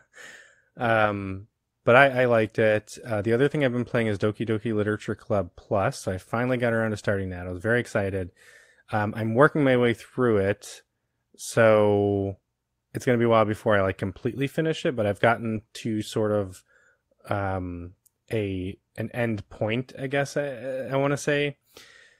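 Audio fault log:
15.55–15.57 s and 19.63–19.73 s, lost packet rebuilt from error correction: no dropout at either spot, just a brief rough, noisier patch, once right before "to sort of" and again between "um a an end" and "I guess". The first fits a single lost 20 ms packet, the second about 60 ms, likely three. Each time the following packet carried a low-bitrate spare copy, and the decoder played that stand-in, so the gap was filled at lower quality.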